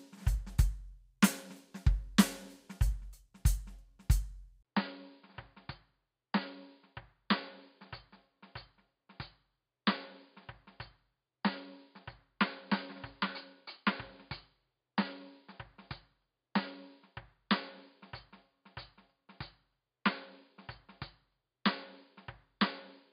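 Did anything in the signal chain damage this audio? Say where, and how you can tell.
Yes. At 4.63 s the music breaks for about 20 ms, then returns about 10 dB quieter, with nothing above 4.9 kHz and a new faint noise floor well below the signal. At the input device stage, this likely reflects an input switched to a poorer device.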